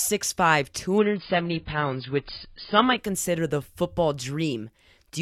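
Adaptive stream at a lower bitrate, 0.98 to 2.98 s in this speech clip: treble abruptly vanishes above 5 kHz with rising codec artefacts and no gap, which fits a seamless switch from 96 kbit/s to 16 kbit/s AAC.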